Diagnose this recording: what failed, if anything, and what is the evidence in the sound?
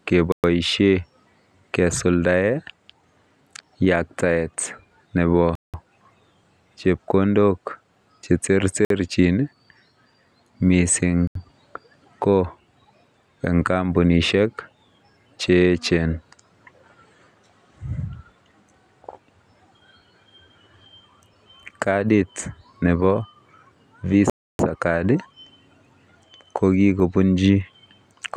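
The speech drops to dead silence five times, at 0.32, 5.55, 8.85, 11.27 and 24.30 s, for 53 to 294 ms each, then resumes. This is likely a Bluetooth stall at the playback stage. Delayed packets let the headphones' buffer run empty until retransmissions arrived.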